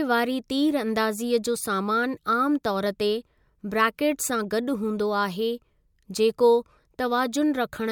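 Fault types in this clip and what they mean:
No faults can be heard.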